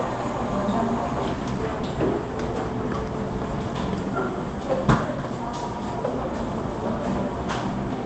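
At 4.03 s there is a skip ahead. Playback jumps forward with no gap at all. About a second and a half of sound is missing. The audio before and after the jump is butted together almost directly, so the cut lands as an abrupt splice. The missing stretch was dropped while later audio was already queued. The jitter buffer likely discarded it after overflowing. The call path's Opus coding limits the sound to about 8 kHz.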